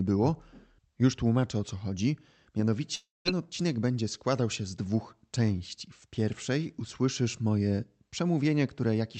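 At 2.95 s the speech breaks off into a fading buzzy smear of the last sound, then goes quiet for about 0.19 s before returning at 3.28 s with roughly 0.3 s gone. That's likely a long network dropout, with the receiver filling the gap.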